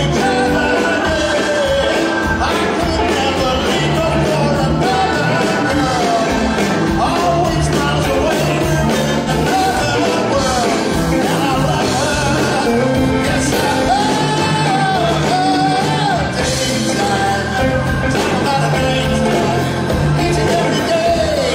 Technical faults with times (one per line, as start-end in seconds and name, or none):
9.18-9.29 AAC frame loss with concealment